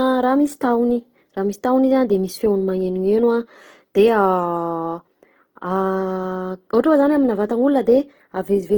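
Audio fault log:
Throughout, Opus compression: the speech carries a plainly audible grainy, rough texture, with tonal parts of the sound turning noisy rather than swirling, yet the bandwidth stays full, reaching about 20.1 kHz. This is likely Opus in its CELT music mode at a low rate, which fits roughly 16 kbps: each band's energy is kept, but bands short of bits are filled by folding lower bands or with noise, so detail becomes grit instead of holes.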